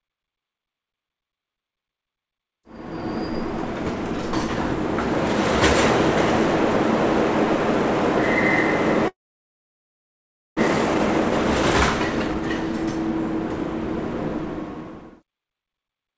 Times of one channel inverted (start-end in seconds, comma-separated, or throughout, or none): none